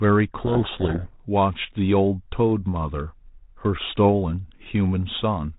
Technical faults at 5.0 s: none

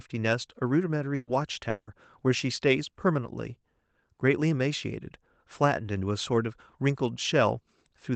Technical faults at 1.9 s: long network dropout

